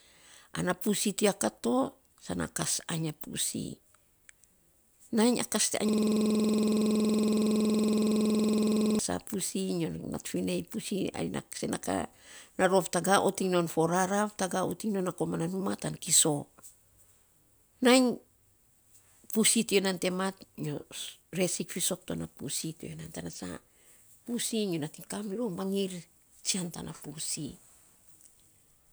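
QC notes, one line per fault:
5.89–8.99 s system hang loop: one 46 ms slice repeats 67 times at 21.5 Hz, giving a rasping stutter that fits a 2048-sample ring buffer cycling during a freeze.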